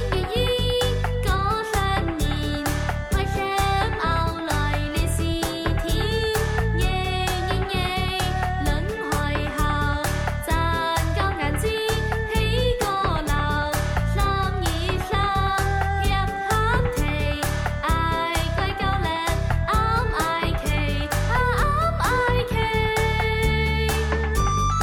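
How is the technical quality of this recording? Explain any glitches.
No glitches or technical faults are audible anywhere in the recording.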